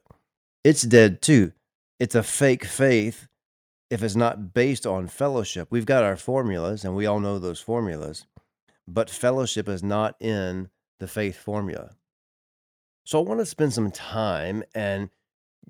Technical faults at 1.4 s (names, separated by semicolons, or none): microphone volume stepped down